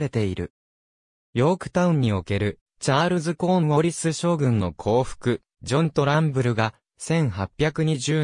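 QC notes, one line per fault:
No technical faults are audible anywhere in the signal, and level, continuity and timing hold steady throughout.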